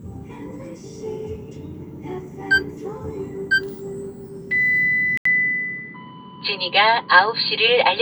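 At 5.17 s the audio drops out for 80 ms. It returns duller and boxier, with nothing above 4.6 kHz, a level shift of a few decibels, and a faint new noise floor. The likely cause is the input switching to a poorer device, which lasts to the end.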